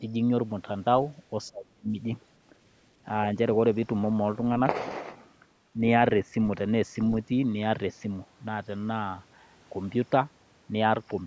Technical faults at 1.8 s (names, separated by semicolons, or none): speech suppressed in double talk